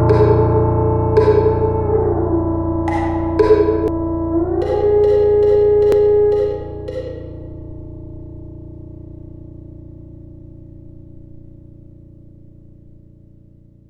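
Damaged data in a compressed stream at 3.88 s and 5.92 s: corrupted bytes make the decoder misread frames and resync, each giving a brief glitch.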